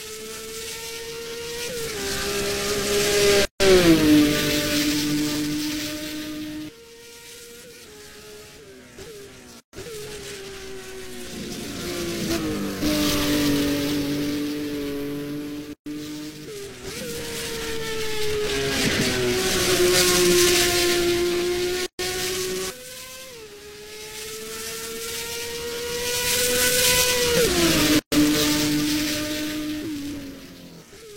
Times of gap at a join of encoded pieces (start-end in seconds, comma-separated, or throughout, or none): 3.45-3.60, 9.60-9.73, 15.73-15.86, 21.86-21.99, 27.99-28.12